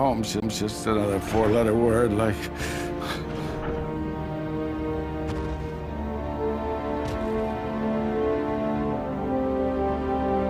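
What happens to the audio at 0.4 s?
A CD skip hits from 0.40 to 0.42 s: the laser jumps to another track turn, so there's a tick, a brief mute, and playback resumes elsewhere.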